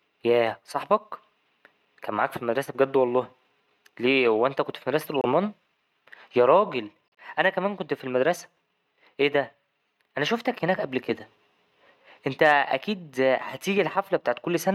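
Corrupt frames were decoded: bit errors in the compressed stream made the decoder misplace energy across frequencies. A loud noise burst at about -10 dBFS runs 5.06–5.26 s after "هو أنت كنت في". Faint blips follow at 7.09–7.18 s, before "أنا كمان كنت في", and at 11.18 s, after "أنا شوفتك هناك قبل".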